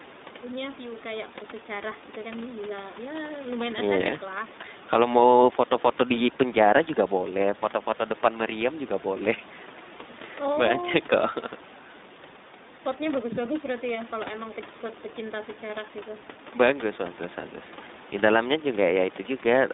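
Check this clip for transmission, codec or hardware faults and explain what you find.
One codec fault runs through the whole speech clip. The iLBC codec coding is present from start to end. Each 20 ms frame is coded on its own, which fits the 15.2 kbps mode. That gives a plainly rough, synthetic edge. On a spectrogram, energy stops sharply at 3.7 kHz and thins below 200 Hz. The room noise, about 20 dB below the speech, comes through that same narrow band.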